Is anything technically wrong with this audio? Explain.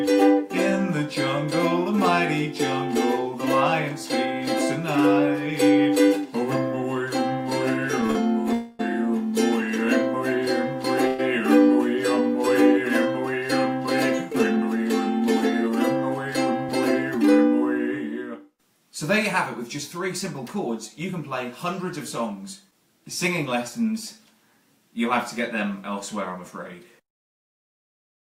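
Yes. There are three kinds of fault, all from a receiver handling late-arriving packets.

Repeated stalls (stutter) run from 8.01 to 8.17 s. Three short gaps, the longest 40 ms and 76 ms in all, are filled by extending the last sound, so about half that stretch is stitched-in filler. Unlike a single freeze, the sound catches several times in quick succession, with nothing lost.

Call audio freezes occur at 8.53–8.81 s (261 ms filled) and 11.07–11.21 s (115 ms filled). In each, the sound hangs as a continuous smeared hold without dropping to silence, then resumes exactly where it stopped. The likely cause is the jitter buffer running empty while packets were held up. This is one unbroken hold rather than a string of hiccups.

A jitter buffer speed-up runs from 14.30 to 17.24 s. With more audio buffered than it aims for, the receiver trims short pitch-period slices to catch up, removing about a tenth of a second. 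The audio runs at 103% pace. Pitch stays put, which separates this from a resampling or playback-rate error.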